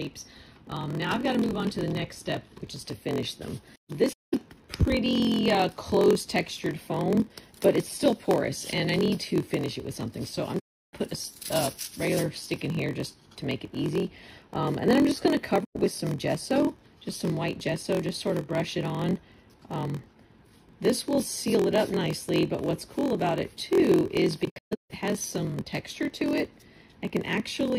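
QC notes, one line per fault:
throughout: block size mismatch (padded). A steady buzz at 43.1 Hz sits under the sound, and everything runs slow at 0.938 times normal speed with pitch about unchanged. Each short written block is zero-padded to fill a longer read block, which fits 1024-sample reads, so a tiny gap recurs every block.
4.12–4.34 s, 10.59–10.93 s, 15.64–15.76 s, 24.44–24.91 s: AAC frame loss with muting. The sound fades out and back in, leaving soft-edged holes of 192 ms, 320 ms, 107 ms and 363 ms. The last is broken up across 427 ms, with its longest silent stretch around 150 ms. Lost frames were decoded as zeroed spectrum, and the overlapping windows taper the edges.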